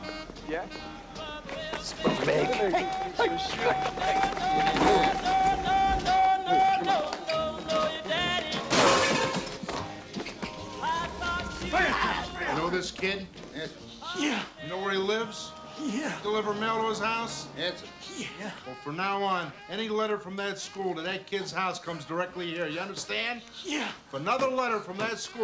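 No technical faults can be heard in this audio, so there is nothing to describe in time order.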